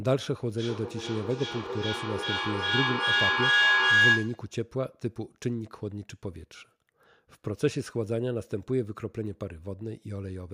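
From 0.58 s to 4.56 s a feedback howl takes over the speech. Two devices in the same room are sharing the call, so sound leaving one loudspeaker re-enters a microphone and comes back louder each trip, narrowing to a tone near 1.5 kHz that peaks about 7 dB above the speech and pulses roughly every 0.4 s. A spectrogram shows a bright horizontal line near 1.5 kHz, and the waveform swells into a dense, throbbing envelope.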